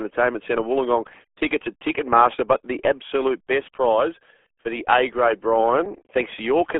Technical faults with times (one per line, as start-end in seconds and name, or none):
0.00-6.79 RealAudio 14.4 codec